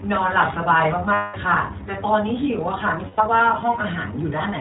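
The speech runs through the iLBC codec for its whole length. Each frame's excitation is coded independently, with a frame structure that points to 20 ms frames and a rate around 15.2 kbps. Everything above 4 kHz is cut away, and the coding damage is plainly audible, leaving the speech narrowband, slightly rough and synthetic in texture.

From 1.14 to 1.36 s, packets go missing and the decoder covers them as lost iLBC frames, about 200 ms of concealment consistent with ten frames. It repeats the last pitch cycle blended with noise, which is heard as a held, faintly buzzy vowel that fades before normal speech snaps back. A shorter loss from 3.08 to 3.20 s, about 100 ms, gives a briefer sustained buzz, again recovering almost immediately because each frame decodes on its own.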